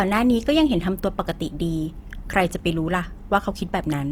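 From start to finish the speech has a rough, grainy texture, with a fizzy noisiness in the upper register rather than swirling gaps, though content still reaches about 20.4 kHz. This is likely Opus compression in its music-style CELT mode, at a rate that fits roughly 24 kbps. Short of bits, the encoder keeps each band's energy but fills the detail with folded or noise-like content, so the damage is plainly audible.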